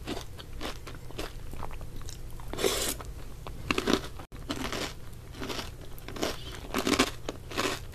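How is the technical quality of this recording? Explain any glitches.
One glitch stands out: a gap at a join of encoded pieces, from 4.25 to 4.32 s. The audio drops into a gap of roughly 70 ms, then resumes where it left off. Two separately encoded sections were spliced without trimming the encoder's start-up delay and final-frame padding. The waveform shows a flat stretch with softened edges, and the spectrogram shows a narrow, full-height blank column.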